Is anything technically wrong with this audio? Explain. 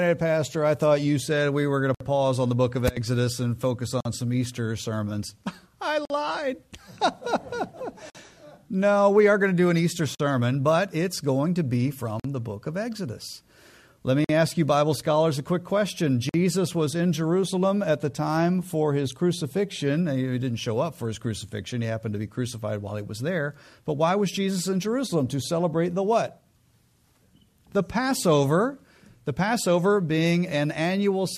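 Yes. Brief dropouts of silence break the continuous sound at 1.95, 4.00, 6.05, 8.10, 10.15, 12.20, 14.24 and 16.29 s: gaps at joins of encoded pieces. The first lasts 59 ms, the rest 48 ms, recurring every 2 s, with smeared edges before the sound resumes where it stopped. Each piece was encoded separately and joined untrimmed, so the encoder's start delay and end-frame padding remain as silence.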